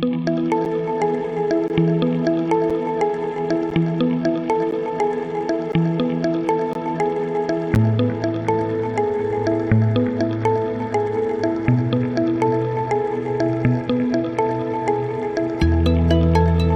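At 0.65, 1.68, 2.70, 3.70, 4.71, 5.72, 6.73 and 7.75 s, a gap between stream segments cuts in: hard-edged silences of 7 to 20 ms, recurring every second. Segment timestamps leave small holes that the player fills with silence, consistent with 1-second segments. No audio is lost.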